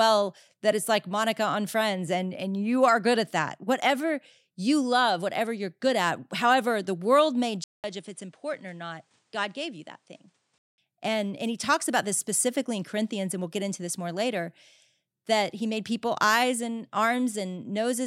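An input switched to a poorer device, from 7.64 s to 10.78 s, right after "however the world may". The speech cuts out for 200 ms, then returns about 5 dB quieter, with nothing above 10.5 kHz and a faint new noise floor roughly 40 dB down. It sounds duller and more boxed in until 10.78 s. This is likely a mid-recording change to a different microphone with a narrower band, its own gain and its own self-noise.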